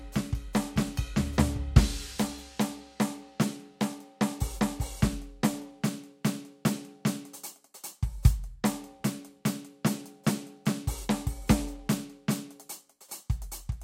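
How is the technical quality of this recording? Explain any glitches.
The technical quality of this music recording is sound, with no glitches to explain.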